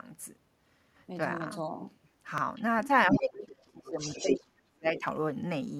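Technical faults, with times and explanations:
2.03–2.09, 2.55–2.62, 2.84–2.88, 3.09–3.19, 3.86–4.40 and 4.97–5.01 s: other side's voice leaking through. Scraps of a second voice range from barely audible to briefly louder than the talker, likely an echo canceller leaving loudspeaker sound in the microphone.
3.12–4.00 and 4.22–5.04 s: speech suppressed in double talk. The talker's voice sinks by up to about 35 dB while the other voice sounds, likely as the canceller turns down both voices at once.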